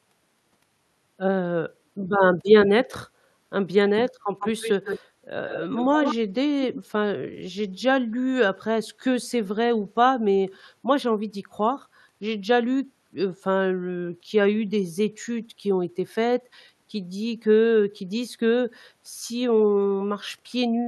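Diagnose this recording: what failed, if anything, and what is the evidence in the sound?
Echo leak at the call-processing stage: a delayed copy of the speech returns from 4.39 to 5.0 s, 5.47 to 6.15 s, and briefly at 6.74 s, each trailing the direct sound by about 147 ms. It is loudest in the middle burst, roughly a few decibels under the speech, and faint at 6.74 s. The likely cause is a far-end loudspeaker feeding its microphone past an echo canceller that did not fully suppress it. Room reverberation would decay smoothly rather than repeat at a fixed delay in scraps.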